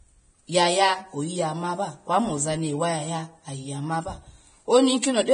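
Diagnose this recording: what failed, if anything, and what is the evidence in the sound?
Codec stage: heavy Vorbis compression is the likely cause, audible throughout the speech. Nothing remains above 9.7 kHz, and the treble below is coarsely quantised into hissy, grainy noise with blurred attacks, pointing to a very low bitrate. A low-pass filter would dull the top without that grain.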